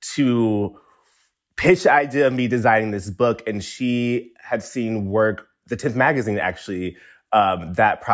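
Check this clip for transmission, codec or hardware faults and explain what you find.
No transmission, codec or hardware faults can be heard here.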